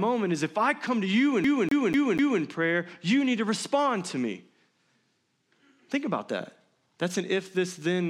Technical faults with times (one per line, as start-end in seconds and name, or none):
1.44-2.42 CD stuck on one turn